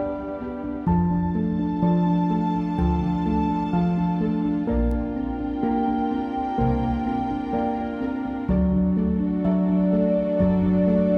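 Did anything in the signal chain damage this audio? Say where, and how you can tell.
Yes. At 4.92 s there is a bit error spike: one sharp tick that has nothing to do with the surrounding sound. On the waveform it is an isolated vertical line, apparently a single sample, reaching about -24 dBFS and snapping straight back. A spectrogram would show it as a thin full-band stripe. This points to a flipped bit in memory, storage or a digital link, which pushed that value off by a power of two.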